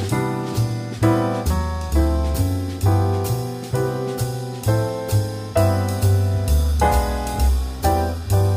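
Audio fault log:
No faults heard anywhere in this audio.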